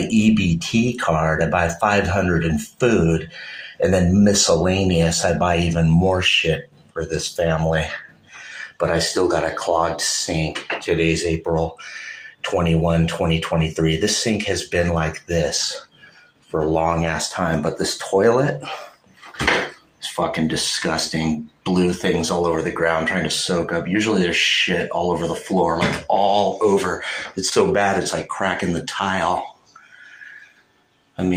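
A brief smear near 27.49 to 27.53 s is short concealed packet loss: about 20 ms of audio arrived too late, and the receiver extended the preceding sound to bridge it.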